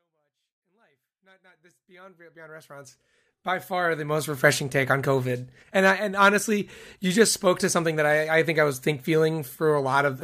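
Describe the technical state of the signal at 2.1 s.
At 2.1 s the speech is intact, with the level still rising evenly partway through a smooth fade-in and no fault present.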